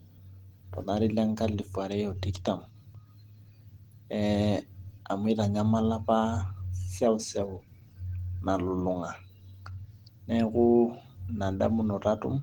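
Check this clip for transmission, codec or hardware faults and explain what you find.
One codec fault affects the whole recording.

Throughout, the speech sounds hoarse and grainy, likely from Opus compression at about 16 kbps in hybrid speech mode. Content still reaches about 20.2 kHz. Filled bands keep energy, so it lacks MP3's swirling holes and warbling.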